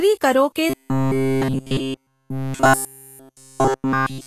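From the start, grainy hiss and smeared treble, likely Vorbis compression at a low bitrate near 33 kbps, distinct from plain noise because detail itself turns granular. From 0.70 s to the end, a rigid metallic buzz at 133 Hz runs through all the speech, likely robotic sound from repeated short buffers of about 7.5 ms, unlike codec warble because the pitch stays fixed.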